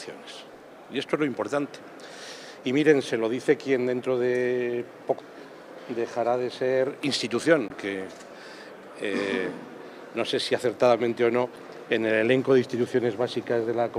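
Damaged data in a compressed stream shows up three times in this audio, at 5.16–5.21 s, 7.67–7.71 s and 11.54–11.58 s, each a brief burst of about 40 ms. Corrupted bytes make the decoder misread those frames and lose sync until the next frame header, giving a short chirp or squawk.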